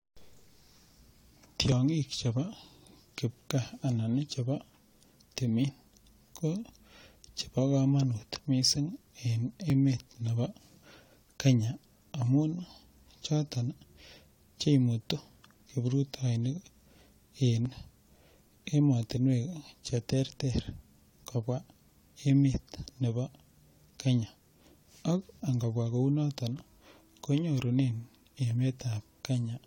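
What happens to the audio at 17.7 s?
At 17.65 s an overlap between stream segments removes a few milliseconds of speech at a 4-second segment boundary, producing an abrupt waveform jump heard as a tiny skip.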